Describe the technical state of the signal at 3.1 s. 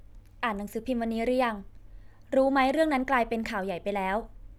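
At 3.1 s the speech signal is intact, with no audible dropout, distortion or other technical fault at that moment.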